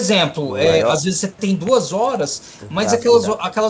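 From 1.02 to 1.13 s, the speech dips by a few decibels. This is likely speech suppressed in double talk, with the echo canceller ducking everything. At 1.67 to 1.71 s, a single loud pop sits a few decibels above the speech. A likely voltage spike was added, and the speech carries on underneath.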